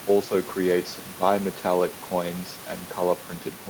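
Nothing stood out on listening to this speech, apart from a room noise sitting about 17 dB below the voice, which belongs to the recording space rather than to the system.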